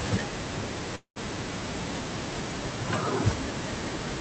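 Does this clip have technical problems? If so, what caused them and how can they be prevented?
Yes. A call audio freeze interrupts the speech from 0.95 to 1.18 s, likely caused by packets stalling in transit until the jitter buffer ran empty. The receiver stretched the last sound into a fading buzz or hiss, then about 100 ms of silence, and resumed where it stopped. This added about 0.2 s of delay but lost nothing. A spectrogram shows a smeared, decaying band, then a blank strip, and the waveform tapers to flat. A steadier network path and an adequately sized adaptive jitter buffer would prevent it.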